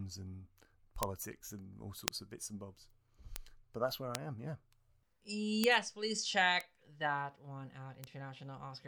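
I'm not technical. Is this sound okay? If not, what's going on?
No. Bit error spikes tick at 1.03 s (just before "and all"), 2.08 s, 3.36 s, 4.15 s (after "that's where"), 5.64 s, 6.61 s (between "please check" and "that one") and 8.04 s. A single flipped digital bit throws the sound far off for an instant, then it snaps back, leaving a sharp click unrelated to the speech.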